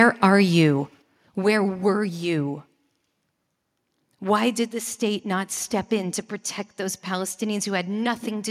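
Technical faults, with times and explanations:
0.00–0.04 s, microphone overload: In the first 40 ms, just before "are you", the waveform tops flatten as the input runs about 2 dB past the converter's ceiling, with a few percent of samples squared off. This adds a brief harsh crackle right at the peak. The likely cause is an input level set too high. Unlike codec distortion, the grit follows only the loudest instant and then vanishes.
1.02 s, microphone volume stepped down: Right after "are you", the whole signal, voice and background together, drops by 6 dB in a single step and stays lower. The drop follows the earlier overloaded peak, which points to call software likely cutting the device's input gain after detecting clipping. A fade or an automatic gain control would ease the level down gradually and would not produce one abrupt step like this.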